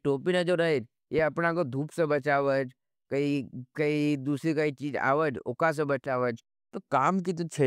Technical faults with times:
1.19-1.21 loud pop

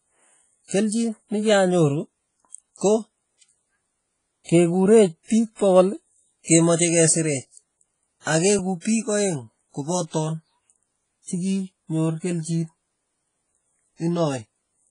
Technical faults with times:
0.00-14.91 WMA compression
4.44-4.49 pre-echo
6.44-6.48 pre-echo
8.21-8.27 pre-echo
8.81-8.85 pre-echo

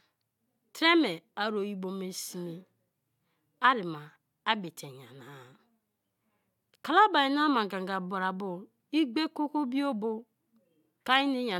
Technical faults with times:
none

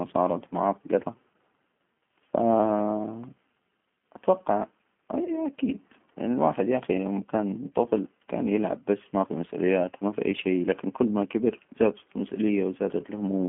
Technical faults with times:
0.00-13.48 G.729 codec
5.24-5.39 VoIP packet loss concealed by the speech codec

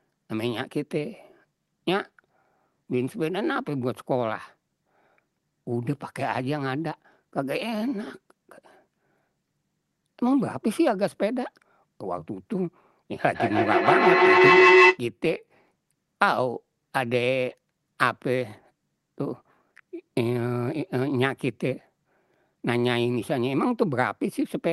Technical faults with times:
13.35-15.02 feedback howl

